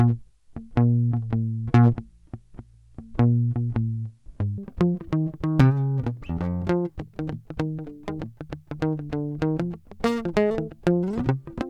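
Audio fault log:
0.00–4.58 s: section at the wrong speed, music running at 0.51×, so tempo and pitch drop together, roughly ten semitones lower, likely from a mismatched clock.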